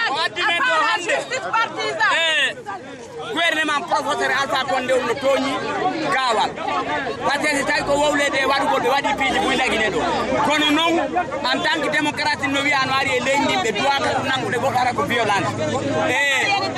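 No technical faults are audible anywhere in the recording, so there is nothing to describe in time order.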